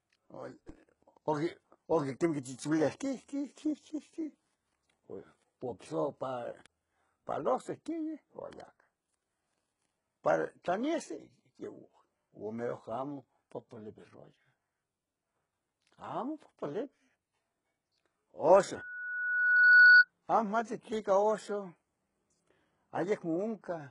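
Throughout, the treble is gritty and lispy, with nothing above 11.1 kHz, which points to heavy damage from likely HE-AAC compression at a very low bitrate, around 12 kbps. Spectral band replication rebuilds the upper band from copied lower bands, so a spectrogram shows smeared, repeated patterns above the crossover and a hard ceiling.

At 0.69 s a DC step makes a low thump. The waveform's zero line jumps abruptly and then drifts back toward centre as a 20 Hz high-pass drains the offset, leaving a short, lopsided bulge visible on the waveform.

From 18.76 to 20.05 s, a loudspeaker feedback squeal at 1.5 kHz swells over roughly a second to about 15 dB above the sound. The mic-to-speaker loop exceeded unity gain at that frequency, drawing a bright horizontal line on the spectrogram.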